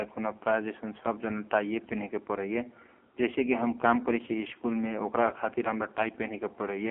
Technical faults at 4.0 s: AMR narrowband mobile codec

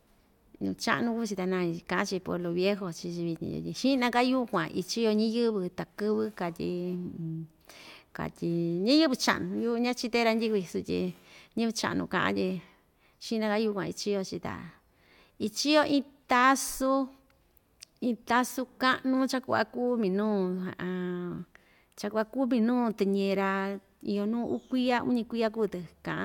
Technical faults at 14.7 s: none

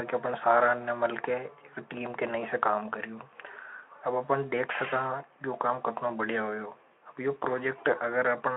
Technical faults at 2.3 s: none

